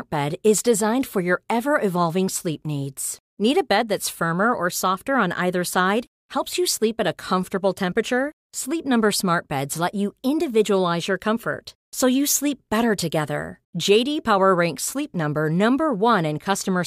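Nothing here trips any alarms, since no technical faults turn up anywhere in this speech recording.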